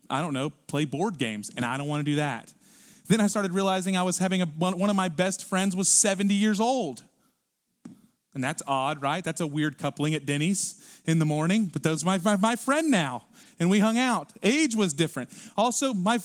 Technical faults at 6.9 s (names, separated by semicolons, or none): none